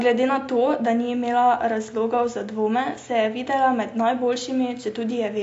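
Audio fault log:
Throughout: AAC compression is the likely cause of the plainly audible codec damage. The speech loses everything above 7.7 kHz and sounds dull and smeared. That smeared texture, not just a missing top end, separates it from simple low-pass filtering, and fits AAC-LC near 32 kbps.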